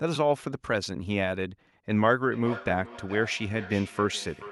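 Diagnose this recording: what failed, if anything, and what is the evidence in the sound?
From 2.27 s to the end at 4.52 s, the speech is shadowed by a repeat of itself arriving roughly 0.4 s later, at most about 15 dB below the direct sound. This is feedback echo between two devices, a call-processing failure. A second device in the room replays this microphone's signal, the microphone picks it up again, and the local echo canceller ignores it because it only removes its own playback. On a spectrogram, each speech burst reappears as a fainter copy offset by about 0.4 s.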